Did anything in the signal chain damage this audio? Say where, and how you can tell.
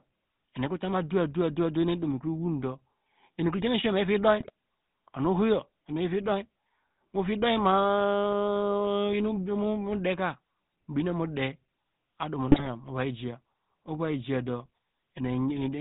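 Yes. The codec stage is at fault throughout. The speech carries the gravelly buzz of the GSM full-rate codec, which fits the 13 kbps full-rate coder. Nothing reaches above 4 kHz, so the sound is dull and boxed in. The roughness comes from the excitation. The coder models the vocal tract and drives it with regularly spaced pulses, keeping only every third excitation sample. That coarse pulse train is what makes the voice rasp and buzz.

GSM bit errors also strike at two points in the radio or network stage. The first runs from 4.40 to 4.50 s. The second runs from 12.48 to 12.66 s and is longer. Each is a brief squawk or gargle, not a clean dropout. That points to a few frames decoding corrupted data. Flipped bits in the filter, pitch or gain values bend the spectrum or spike the level frame after frame while the bad patch lasts. The error density points to a few percent of bits damaged.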